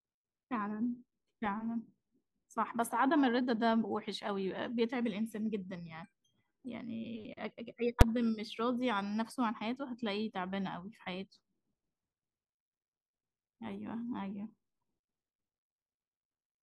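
Invalid numbers at full scale hit this speech clip at 8.01 s: a calculation produced invalid values that were pinned to one extreme for about 5.8 ms, which fits a 256-sample block, giving one loud bang.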